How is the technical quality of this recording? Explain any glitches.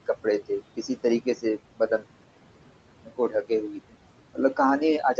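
The recording has audible noise-suppression damage throughout, plus three brief spots where the suppressor bit into the speech itself. The room noise sits about 15 dB below the speech, and nothing reaches above 8 kHz, as expected for a wideband call path.

Noise suppressor artifacts run through the whole clip. The suppressor estimates the steady background and pulls down each frequency band it judges to be noise, frame by frame, by up to about 18 dB. The background therefore sinks in pauses and swells back under the speech. This is different from plain room noise, which would hold a steady level instead of pumping with the speech.

Speech cut by the noise suppressor happens at 1.21–1.45 s, 1.77–2.03 s and 3.05–3.51 s. In each span, quiet parts of the speech, roughly a tenth of a second in the first two and a bit more in the third, are mistaken for noise and turned down along with the background. 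The drops are about 13, 18 and 14 dB. Those sounds come across swallowed or faded. A network dropout would instead leave a hard gap or a click, and would not lower the background in step with the speech.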